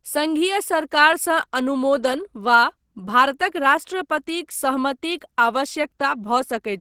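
From start to finish the speech sounds hoarse and muffled. The top end still reaches up to about 20.2 kHz, so the dullness isn't from the band being cut short. This is plainly audible Opus compression, likely from the encoder running in its hybrid speech mode at a low rate, with the muffled, hoarse texture fitting something around 16 kbps.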